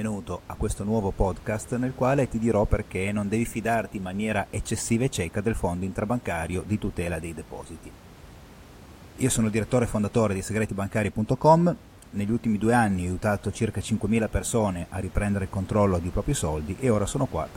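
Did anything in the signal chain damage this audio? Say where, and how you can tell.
No, nothing damaged this audio.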